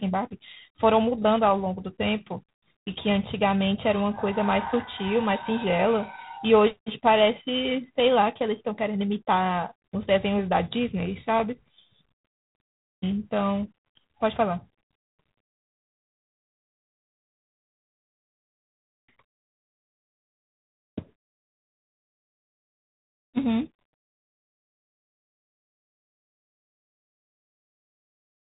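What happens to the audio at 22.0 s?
At 22.0 s you're inside a section at the wrong speed, running from 20.97 s to the end. Everything plays about 1.14 times too fast, so pitch rises by roughly two semitones and the speech sounds higher and hurried. The likely cause is a player or editor resampling that stretch against the wrong clock.

The G.726 ADPCM damage running through the whole clip is still there too. Each sample is coded as a small difference from a running prediction, and the coarse steps leave a harsh, rasping hiss that follows the speech level, consistent with the 24 kbit/s mode. Nothing above 3.8 kHz gets through.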